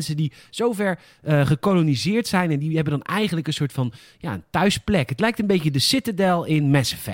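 No technical faults turn up anywhere in the clip. There is nothing in the audio to place on a timeline or trace to a cause.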